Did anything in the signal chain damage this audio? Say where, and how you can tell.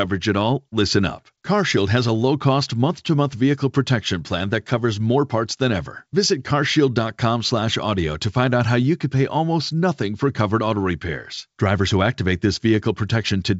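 No, nothing damaged it.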